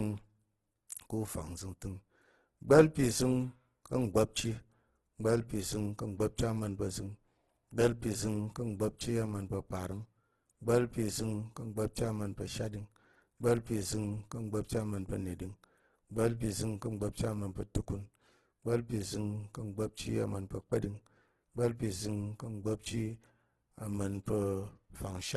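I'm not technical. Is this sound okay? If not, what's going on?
No. From start to finish the speech has a rough, grainy, hissy texture, and the brightest top end is cut away. That is likely heavy Opus compression: squeezed into too little data, the codec fills in detail with noise.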